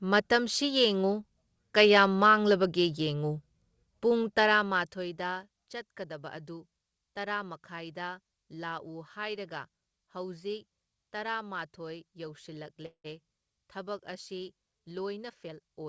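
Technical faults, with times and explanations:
12.86 to 13.06 s: call audio freeze. The speech halts and its last sound trails off as a fading buzz or hiss, then about 80 ms of silence. The likely cause is delayed packets draining the jitter buffer. Nothing is lost. Speech resumes where it stopped, 0.18 s late.
15.29 to 15.89 s: jitter buffer speed-up. The speech runs at 117% speed with unchanged pitch and sounds hurried. The receiver held too much audio. It cut many short pitch-period slices, about a tenth of a second in total, to shrink the delay.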